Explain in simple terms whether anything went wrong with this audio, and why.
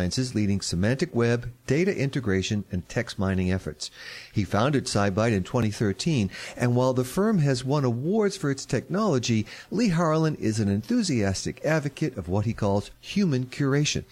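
At 5.63 s the sound jumps forward slightly, with no gap of silence. This points to a dropped buffer (overrun): the recording software most likely fell behind, so the hardware overwrote a few milliseconds of audio before it could be saved. The two sides of the lost piece are joined directly. Because nothing is replaced with silence, this sounds like a skip rather than a brief dropout into quiet.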